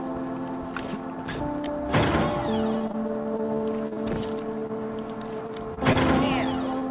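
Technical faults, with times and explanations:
2.78–4.15 s, repeated packet loss (robotic sound): over this span of about 1.4 s, twelve separate holes open one after another, the longest about 41 ms, and about 140 ms of real sound is missing. Each hole is patched by continuing the preceding sound, so about 18% of the span is synthetic fill. Unlike the isolated dropouts later, the holes come too close together for the sound to recover between them, which is why it turns choppy and mechanical.
4.59–4.63 s, 4.67–4.71 s, 5.47–5.50 s, 5.74–5.79 s and 6.79–6.83 s, short concealed packet loss: each is a single hole of about 20 ms, filled by extending the last sound's pitch or its noise shape and then blending back into the real audio. Each one passes as a brief smear or wobble, and a short sound can drop out. Unlike the robotic stretch, each hole is isolated and the sound recovers fully in between. 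Unlike a stall, real content is actually lost.
5.93–5.97 s, short stall from a late packet: here nothing is lost. A packet arrived about 24 ms late, the jitter buffer ran dry, and the receiver held the current sound until the packet arrived, then carried on from the same point. This is heard as a sound lingering slightly too long, with a faint buzz or dip, rather than a gap. The narrowband telephone-codec band, with nothing above 4 kHz, stays the same across the stall.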